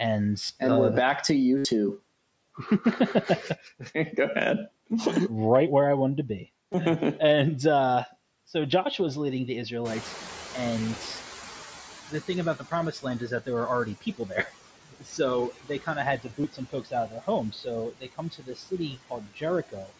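Noise suppressor artifacts run through the whole clip. The suppressor pulls steady background down by about 16 dB, frame by frame. The residue dips between phrases and swells under them.

Concealed Bluetooth headset packet loss first appears at 0.47 to 0.49 s, a 22.5 ms gap. A longer 75 ms run follows at 1.57 to 1.65 s. It fits roughly ten lost headset frames. The receiver repeats a recent stretch of waveform, so this run buzzes briefly at full level. It ends with a small warble where real audio resumes. A brief 15 ms loss comes at 6.72 s, and a single loss at 8.71 s is nearly hidden.

Near 10 s the room background jumps by about 15 dB. The noise suppressor is catching up from 9.84 to 12.97 s. Its noise estimate lags, so the louder noise passes through first. It then sinks over about three seconds to a cut of about 14 dB.

Speech cut by the noise suppressor starts as that adaptation settles. 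The suppressor mistakes parts of the speech for noise. Short dips come at 12.09 to 13.48 s, 13.86 to 14.51 s and 14.91 to 15.19 s, about 12, 15 and 18 dB deep. They leave soft sounds swallowed.

Another 22.5 ms concealed loss lands at 16.42 to 16.44 s. It is a short patch.

The heaviest speech cut by the noise suppressor runs from 15.56 to 19.93 s. Drops reach about 19 dB. Around two seconds of speech in that stretch turn faint, with quiet endings sunk into the background.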